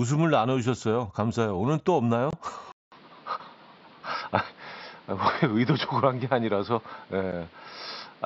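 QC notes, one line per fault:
2.31–2.33 s and 7.32 s, unconcealed Bluetooth headset packet loss: the sound drops out for about 22.5 ms, then for about 7.5 ms, with hard edges on each gap. Packets between headset and phone went missing and nothing filled them in, so silence sits where audio should be. The first gap fits three lost 7.5 ms frames and the second fits one, which points to the mSBC link's frame size.
2.72 s to end, input switched to a poorer device: a roughly 200 ms silence opens the change, then the audio stops above 5.5 kHz and sounds duller and boxier. A new background noise sits around 30 dB below the speech, and the level stays about the same. The likely cause is the system moving its input to another microphone or a headset call profile with a narrower band and its own noise.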